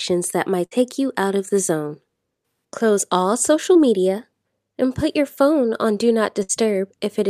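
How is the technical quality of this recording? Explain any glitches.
The recording has three network dropouts, two of one kind and one of another.

A burst of packet loss occurs at 0.65 to 0.73 s, between "that might" and "you out of the", and again at 6.43 to 6.51 s. Each time a run of packets arrived too late or not at all. The receiver stretched the last sound for about 57 ms and then 62 ms, fading it as a held buzz or hiss. About 60 ms of speech is gone before playback resumes.

Short concealed packet loss comes at 3.73 to 3.77 s, after "all social" and before "media and put your". A few hundredths of a second failed to reach the decoder in time. The receiver bridged roughly 16 ms by extending the preceding sound and then blending into the real signal. About 20 ms of audio is lost, heard as a brief smear or wobble rather than a clear gap.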